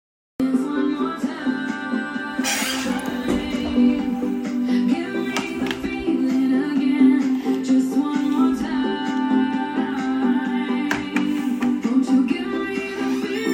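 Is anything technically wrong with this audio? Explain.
Yes, there's a cut-off start. The first 0.40 s is digital silence, then the sound comes in abruptly at 0.40 s, already mid-event. Capture evidently began late, so there's no natural attack or fade-in, just a hard jump from nothing.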